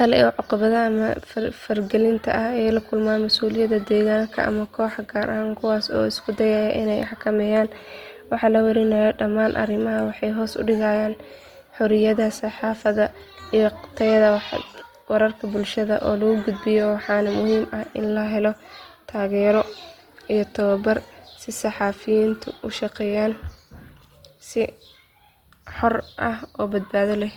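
Throughout the speech, there is plainly audible Opus compression. Tones sound grainy, rough and noisy. The likely cause is the encoder's music mode keeping each band's energy but filling fine detail with noise, which fits about 24 kbps. Content still reaches 20.2 kHz.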